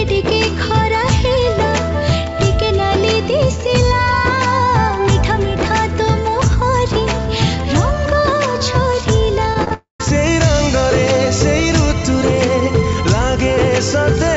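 Three short runs of concealed packet loss come first. Packets carrying the audio failed to reach the decoder in time at 9.54 to 9.56 s, 9.64 to 9.68 s and 9.68 to 9.72 s, each gap between about 10 and 30 ms long. The receiver patched each hole by extending the preceding sound and then cross-fading back into the real signal. The result is a quick cluster of smears and wobbles, with brief transients inside those gaps able to disappear.

Straight after that, from 9.74 to 10.00 s, comes what is likely a long network dropout, with nothing arriving for roughly a quarter of a second. Concealment carries the last sound forward as a fading buzz or hiss, and for about 130 ms of that stretch only silence remains. The audio then resumes further on, and the material from the gap is simply missing rather than delayed.

At 12.96 s a single sharp click marks where a couple of samples were likely dropped from the stream, a few hundredths of a millisecond in all. 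The waveform jumps abruptly from one value to a later one, so nothing audible is removed, but the discontinuity shows as a thin vertical streak across the spectrum. Throughout, the audio carries nothing above 8 kHz, which fits the wideband G.722 call codec on this path.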